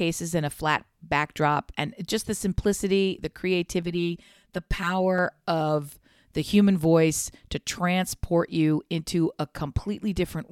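Channel delay (comb filtering) runs from 3.83 to 5.18 s, between "just the simplicity the" and "of the human voice". One channel trails the other by about 5 ms. When the two are summed to mono, shared content cancels at evenly spaced notches from around 100 Hz upward, leaving the speech hollow and phasey.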